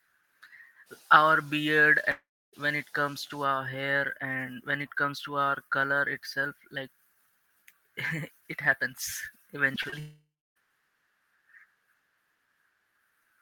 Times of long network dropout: 2.11-2.55, 10.00-10.58

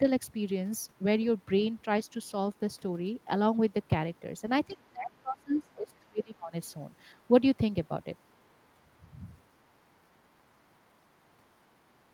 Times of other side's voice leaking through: 4.74-4.89, 5.94-5.98

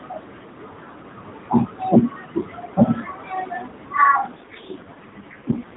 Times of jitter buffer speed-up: none

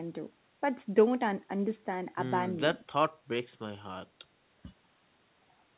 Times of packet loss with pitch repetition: none

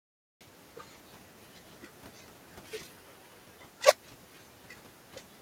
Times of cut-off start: 0.00-0.41

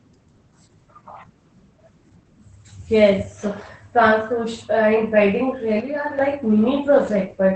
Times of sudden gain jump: 5.80-6.19

